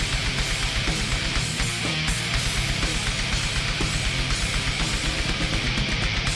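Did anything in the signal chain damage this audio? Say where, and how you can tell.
No, nothing along the chain seems to have done this one any harm; there's no stage to point to and no moment where the sound gives a problem away.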